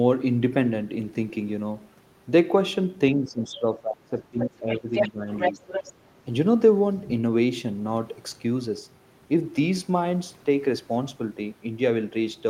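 An echo canceller likely losing track during double talk pulls the speech down from 3.15 to 4.92 s, with dips of about 20 dB at the deepest across roughly a second and a half. It then ducks again at 5.11 to 5.27 s (about 15 dB) and 5.51 to 5.62 s (about 10 dB), so the speech sinks and breaks up in short patches. The same canceller likely leaves part of the loudspeaker signal in the microphone, so the other side's voice leaks through at 4.39 to 4.46 s, about 10 dB under the speech. It returns at 4.95 to 5.1 s at roughly equal level, then from 5.33 to 5.92 s about 5 dB down, as a second, competing voice.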